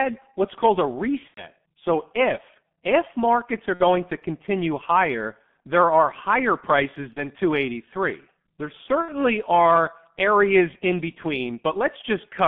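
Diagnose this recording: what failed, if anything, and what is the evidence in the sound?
The codec stage shows heavy G.723.1 codec damage at about 6.3 kbit/s. A spectrogram shows a band from 150 Hz to 3.5 kHz with nothing above it, and smeared consonant energy.

At the network stage there is VoIP packet loss concealed by the speech codec. It occurs at 1.28–1.48 s after "what's called a", at 3.74–3.82 s before "to continue higher there", at 7.13–7.23 s, and at 9.02–9.11 s before "are areas in". In each gap the decoder repeats its last pitch and filter, which shows as a fading buzzy tone or coloured noise. The first gap fits three lost frames and drops to silence on the waveform.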